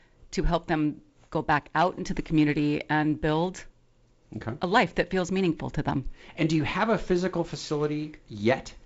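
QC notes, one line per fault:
No faults to log here; the speech comes through G.722 wideband telephone coding with nothing above about 7.7 kHz and a faint coding hiss that fits its lowest 48 kbit/s mode.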